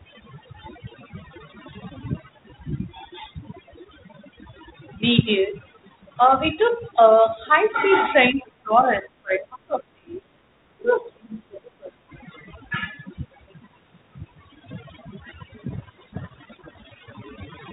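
A noise reduction stage set far too strong runs through the whole of this speech recording. That overdone noise removal pushes bands near its noise estimate down to nothing, so the background falls to near silence flecked with twinkling specks. An echo canceller likely confused the talker with loudspeaker echo while both sides spoke, so speech is suppressed in double talk from 8.32 to 10.24 s, briefly at 10.44 to 10.48 s, and again from 10.77 to 12.01 s. There the voice dips by roughly 20 to 30 dB. From 15.73 to 17.13 s, a codec payload misread sets in: the decoder reads the G.726 code words with their bit order reversed, and the speech is buried under harsh distortion until it clears. Beneath all this, the telephone band stops at 4 kHz, with the light coding grain expected of G.726 ADPCM at what sounds like 32 kbit/s.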